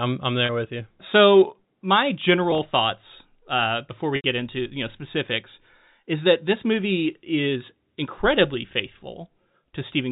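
Speech carried over G.711 telephone coding, with nothing above 4 kHz. Packet loss with pitch repetition occurs three times. At 0.46–0.49 s and 2.51–2.59 s about 30 ms is lost, the second in runs of 10 ms or less, and the repeated last pitch period gives a brief held buzz. At 4.16–4.24 s an 80 ms gap fades toward silence before the speech cross-fades back.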